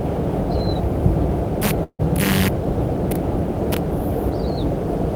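A long network dropout runs from 1.83 to 2.01 s. The last sound is stretched into a fading buzz for about 155 ms, then roughly 60 ms of silence follows. About 160 ms of audio is skipped, likely because packets stopped arriving.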